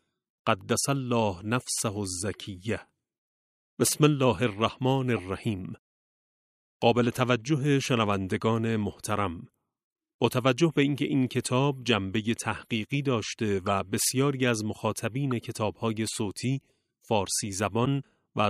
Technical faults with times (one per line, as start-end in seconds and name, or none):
13.66-13.69 corrupt frame decoded
15.31 corrupt frame decoded
17.85-17.87 corrupt frame decoded